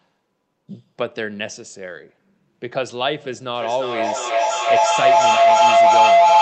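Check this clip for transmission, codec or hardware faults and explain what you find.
A feedback howl takes over the second half of the speech. From 3.54 s to the end, two devices in the same room were on the call, so the loudspeaker's output fed back into the microphone with net gain on every round trip. Instead of dying away, each repeat grew and narrowed to a tone around 700 Hz, with repeats roughly every 300 ms. It climbs to about 12 dB above the speech and never releases, because nothing breaks the loop.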